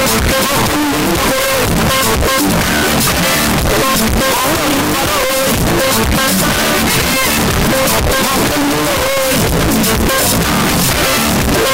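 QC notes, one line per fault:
Throughout: signed and unsigned mixed up. The 16-bit samples were likely read with the wrong sign convention, flipping the top bit, so every zero crossing becomes a leap across the whole range. The result is very loud, harsh distortion, with soft passages as loud as strong ones.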